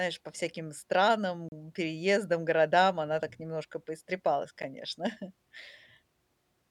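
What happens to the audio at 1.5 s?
Output samples went to zero for about 34 ms, a block of digital silence from 1.49 to 1.52 s, cutting the speech abruptly and leaving a short hole.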